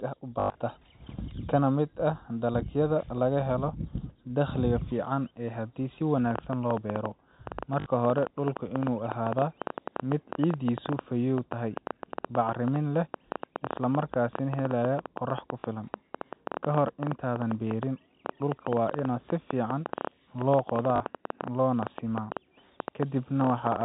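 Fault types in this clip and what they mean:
Packet loss with last packet repeated: When packets go missing, the receiver fills the gap by replaying the last good one. This produces a short robotic stutter with a buzz near 50 Hz, consistent with 20 ms packets. The worst instance begins just after "ah u" at 0.4 s, where 140 ms is lost across 0.4–0.56 s, with a longest run of 100 ms. Briefer ones follow at 7.8 s, 15.61 s and 20.96 s. On the waveform, identical repeated segments show abrupt joins. On the spectrogram, frozen slices are bounded by vertical lines.
Train of clicks: A stream of sharp, similar pulses begins after "fiican haddii si" at 6.31 s and runs to the end of the clip. There are about 9.2 per second at uneven spacing, roughly 150 in total, with peaks around 15 dB above the speech. The likely cause is electrical interference or a struggling interface. In the waveform they appear as narrow spikes. 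In the spectrogram they form thin vertical lines reaching up to the 4 kHz ceiling of the G.711 telephone band.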